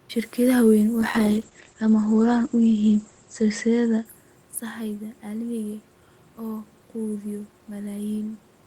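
From 1.0 to 4.25 s, a call bitrate drop takes the encoder from 32 to 11 kbps, and bandwidth narrows from 20 kHz to 8 kHz, so the speech turns muffled and rough.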